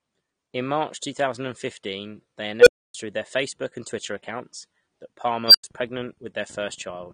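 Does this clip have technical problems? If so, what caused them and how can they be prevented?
Yes. Throughout the speech, the sound is dull and smeared with a fizzy, warbling edge on sibilants. That is likely AAC compression at a low bitrate, around 32 kbps, where the encoder drops high frequencies and leaves spectral holes. Encoding at a higher bitrate would prevent it.

At 2.60–2.94 s and at 5.48–5.64 s, the second just after "accounts that", an unstable filter with bad coefficients fed back on itself. A tone swelled over roughly 60 ms, around 500 Hz the first time and around 5 kHz the second, clipped, then cut to silence for about 0.28 s and 0.09 s respectively while the filter reset. Validating filter coefficients so every pole stays inside the unit circle would prevent it.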